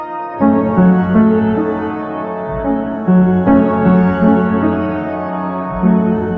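A music clip with no audible technical faults.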